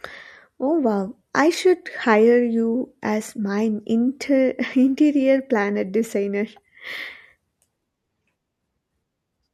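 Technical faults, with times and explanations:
No technical faults are present in this speech recording.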